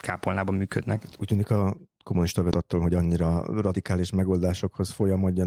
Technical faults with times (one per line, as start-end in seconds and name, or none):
2.51-2.53 skip ahead
2.61-3.93 jitter buffer speed-up